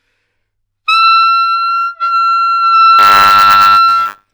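From 2.98 s to the end, buffer tearing sets in: the writer and reader of the ring buffer have slipped, so a small slice of each 10 ms period replays audio from a few tens of milliseconds earlier, with hard joins producing a steady 100 Hz rattle under the sound.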